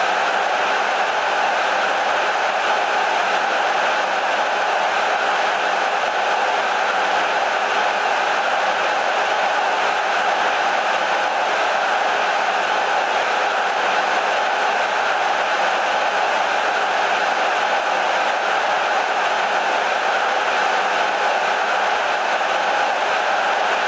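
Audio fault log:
Nothing to flag here; the audio has the usual call microphone processing, with the lowest bass trimmed and nothing above 8 kHz, which is just how that path normally sounds.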